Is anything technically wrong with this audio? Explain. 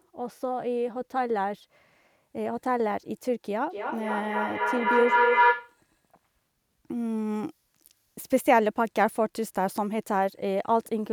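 Yes. Feedback howl, 3.7 to 5.8 s: a mic-to-speaker loop gaining on each pass, with a repeat delay of roughly 300 ms, builds a tone near 1 kHz, about 5 dB above the speech. It shows as a bright horizontal spectrogram line.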